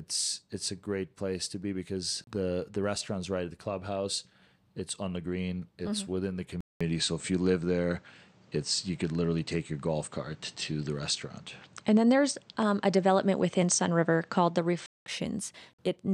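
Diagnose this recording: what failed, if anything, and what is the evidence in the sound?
At 6.61 s the sound drops out for about 200 ms, then returns duller, with nothing above 8.6 kHz, a level shift of a few dB and a new, quiet noise floor until 15.06 s. That points to the input switched to a poorer device, likely at the driver stage.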